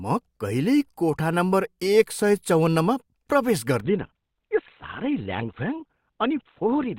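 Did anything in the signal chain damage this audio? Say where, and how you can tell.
Yes. At the network and codec stage, the speech drops abruptly at 3.80 s, with no gap, to a narrow sound that lasts to the end. Nothing survives above 4.2 kHz, and coding artefacts rise. That fits an adaptive stream switching to a lower bitrate after throughput fell.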